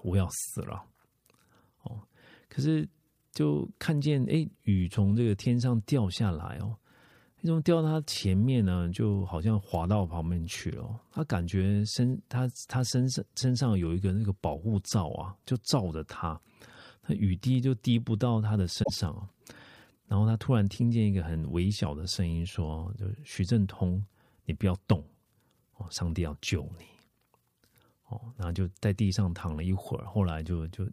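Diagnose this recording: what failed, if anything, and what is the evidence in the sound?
A short glitch breaks into the speech from 18.80 to 18.91 s, about a tenth of a second. This is damaged data in a compressed stream: corrupted bytes in the stored or transmitted file made the decoder misread those frames and lose sync until it found the next valid frame header.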